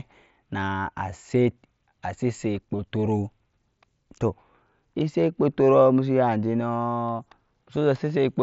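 At 0.60 s and again at 2.77 s, the link between headset and phone dropped voice data for about 15 ms, which fits a pair of lost frames each time. This is concealed Bluetooth headset packet loss: the receiver filled each gap by repeating the closest-matching piece of the speech just before it. Both gaps are short, so each comes through as a brief buzzy smear in the speech, with a slight warble as the real signal resumes over the light graininess of the mSBC link.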